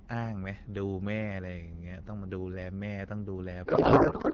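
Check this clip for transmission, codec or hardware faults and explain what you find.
There's one fault, a codec payload misread near the end of the speech, sitting on top of AMR-WB coding whose light artefacts fit a rate around 12.65 kbit/s. From 3.65 s to the end, octet-aligned AMR gets read as bandwidth-efficient, so the decoder finds its fields shifted and the speech becomes garbled noise and warble.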